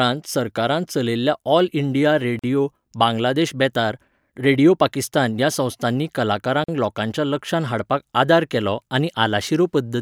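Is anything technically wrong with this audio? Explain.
Yes. There are two gaps at joins of encoded pieces: 2.39 to 2.44 s, after "सरकारान चलयल्ल्या ऑल इंडिया", and 6.64 to 6.68 s, after "रेडिओ पाकिस्तान ह्या संस्थांनी". Separately encoded segments were spliced without trimming encoder delay and final-frame padding. The result is about 43 ms of silence breaking the speech, with smeared edges, before it resumes where it stopped.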